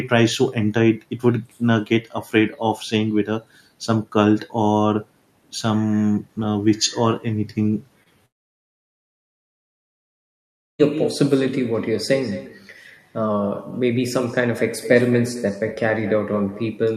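Echo with no canceller runs through the whole recording. Every phrase is followed, about a fifth of a second later, by a thinner copy about 13 dB quieter. The far end's loudspeaker is feeding its microphone, and nothing strips that return before it travels back.

Short concealed packet loss occurs from 8.03 to 8.08 s. Around 20 ms of audio failed to arrive, and the decoder patched the gap by extending the preceding sound before blending back, leaving a brief smear or wobble.

Long network dropout follows from 8.26 to 10.81 s. After a very short fading continuation, the speech cuts out into silence for about two and a half seconds, then resumes further along. This is likely a stretch where no packets reached the receiver, so that portion is simply gone.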